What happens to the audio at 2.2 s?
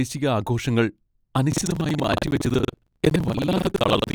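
Buffer tearing, from 1.49 s to the end at 4.15 s: the write and read positions in the ring buffer have crossed, so roughly a third of each buffer replays audio from about a tenth of a second earlier. The result is a robotic rattle at 21.5 Hz, which fits a 2048-sample buffer.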